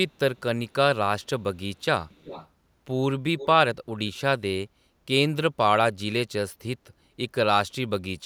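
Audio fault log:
2.09–2.48 s and 3.38–3.46 s, echo leak: a faint delayed copy of the speech returns about 0.36 s after the original, first as a longer trail sitting roughly 20 dB below the speech, then as a brief scrap roughly 15 dB down. The likely cause is a far end playing the call over a loudspeaker whose echo canceller failed to fully suppress what its microphone picked up, so that residue was sent back.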